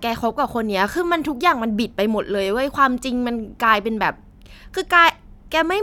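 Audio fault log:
No fault is heard anywhere in the clip.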